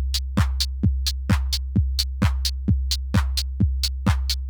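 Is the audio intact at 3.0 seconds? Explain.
Yes, the audio is intact at 3.0 seconds, with no fault audible at that moment.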